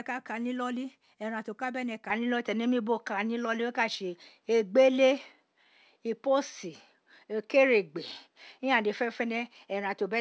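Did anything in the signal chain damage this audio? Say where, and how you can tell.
Yes. At 2.10 s, right after "ti o ka bene", the speech abruptly turns duller and shifts in level by roughly 5 dB. A faint new noise floor appears about 50 dB down. From there to the end nothing is present above 6.2 kHz. The G.722 call path's 8 kHz ceiling holds steadily before the change, so the step-down comes from the capture stage. There is no gap at the switch, and the likely cause is an input switched to a poorer device.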